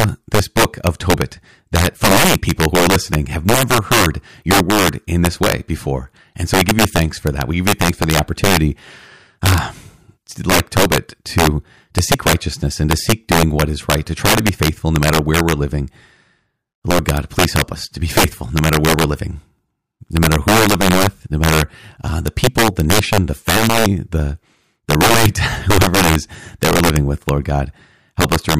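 Speech, and across the whole clip its loudest syllables break into violent cracks caused by integer overflow. The signal was driven about 10 dB past the largest value the integer format can hold, and instead of being limited, each peak that went over wrapped around to the opposite extreme. Only a small share of samples, around 2 percent, cross that line. Clipping would flatten those peaks into a buzzy distortion, but here every excursion swings across the full range, producing much sharper snaps.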